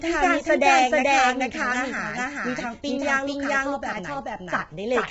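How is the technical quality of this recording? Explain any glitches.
The recording has two faults running through the whole clip: the speech is doubled by a delayed copy, and it carries heavy low-delay codec damage.

Doubled audio track: the speech is followed throughout by a second, full-band copy about 400 ms behind at roughly equal loudness. This is likely a second capture path or a misaligned edit. On a waveform, every burst repeats as a clean, undecayed twin, and a spectrogram shows each syllable pattern shifted sideways.

Low-delay AAC compression: across the whole clip, the speech sounds rough and grainy, with hiss between harmonics. This is likely AAC-ELD, whose short frames smear pitch detail, and the heavy damage fits a bitrate around 16 kbps. A spectrogram shows blurred harmonic lines, noise filling the gaps, and nothing above 7.8 kHz.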